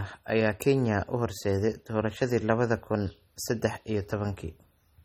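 MP3 compression, throughout: the treble stops at 16.7 kHz and speech sounds watery, likely from an encoder starved of bits, consistent with about 32 kbps.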